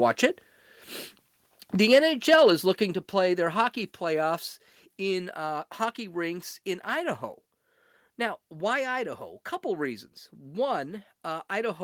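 Microphone overload at 2.32 to 2.51 s, just before "is looking to play": peaks flattened at the converter's limit, about 5 dB over, likely from excessive input gain, giving a harsh crackle.

Microphone volume stepped down at 2.94 s, between "is looking" and "to play their hockey": everything suddenly drops about 5 dB, likely the call software cutting input gain after the clipping.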